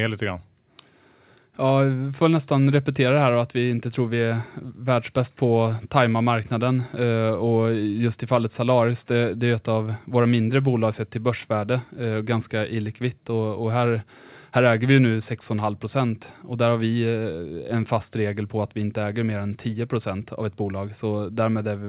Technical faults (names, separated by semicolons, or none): none